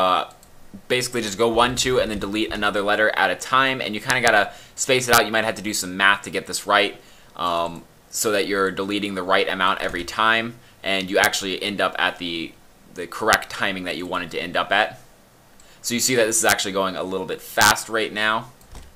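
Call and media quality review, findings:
Integer overflow: violent cracks on loud peaks at 4.10–4.28 s, 5.13–5.18 s, 11.24 s, 13.33 s, 16.49–16.52 s and 17.61–17.71 s. Probable gain or mixing stage overdriven by about 1 to 3 dB, wrapping to opposite sign instead of saturating.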